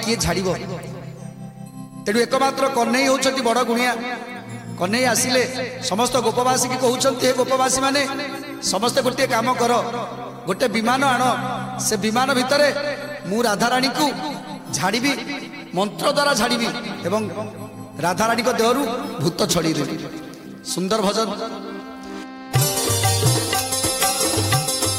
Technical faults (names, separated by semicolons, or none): hard clipping